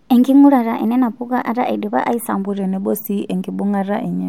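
From 0.00 to 2.45 s, a section plays at the wrong speed. It runs 1.12 times too fast. Pitch rises by about two semitones, so the speech sounds higher and hurried. Then it abruptly returns to normal. Playback against the wrong clock is the likely cause.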